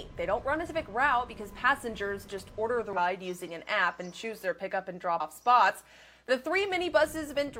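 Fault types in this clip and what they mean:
Damaged data in a compressed stream: corrupted bytes make the decoder misread frames and lose sync, causing brief garbled blips of about 50 ms near 0.65, 2.93 and 5.16 s.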